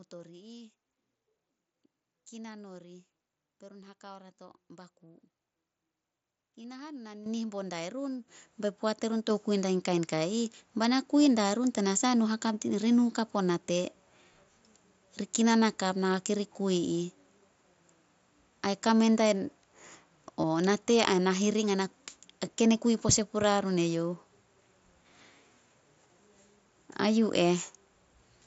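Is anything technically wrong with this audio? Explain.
Yes. Concealed Bluetooth headset packet loss occurs at 6.63 s and from 20.41 to 20.44 s. Lost headset packets, about 15 ms and then about 22.5 ms, were filled by repeating recent waveform, heard as brief buzzy blips. Microphone volume stepped up at 7.26, 8.28 and 9.30 s. The call software raised the input gain by about 10, 7 and 3 dB, so speech and background jump louder together. Through the mSBC headset codec, speech stays limited to 8 kHz with light graininess.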